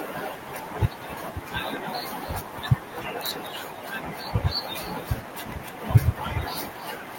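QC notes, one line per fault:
Throughout, echo with no canceller: the far end is playing the call through a loudspeaker, its microphone is picking that playback up again, and no echo cancellation is removing it, so the speech returns to this side after a network round trip of around 300 ms. Every phrase is trailed by a second, weaker copy sitting about 16 dB down, thinner than the original.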